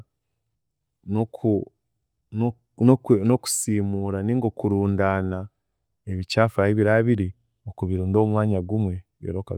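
Nothing technically wrong turns up in this bit of speech, so there's no fault to point to at any moment in it.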